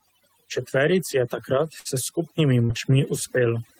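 Throughout the speech the background drops and breaks up into twinkling specks. That is overdone noise removal: a reduction stage set too aggressively switches off individual frequency bands near its noise estimate, taking the quieter parts of the voice with them.

Right after "je takrat", from 1.79 to 1.88 s, the sound holds and fades for a moment, then picks up further along with a piece gone. This burst of packet loss left a hole the receiver papered over for about 56 ms by extending and lowering the last sound. Roughly 40 ms of real audio never returns, and the playback shifts by about 16 ms.

From 2.65 to 2.72 s there is a brief smear where the audio wobbles and loses definition. This is short concealed packet loss: for about 42 ms the receiver synthesised a continuation of the preceding sound before blending back into the real signal, and about 40 ms of the original is missing.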